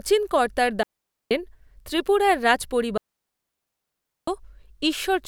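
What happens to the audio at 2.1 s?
Nothing goes wrong at 2.1 s: the speech runs straight through that moment with no dropout, click, distortion or other fault.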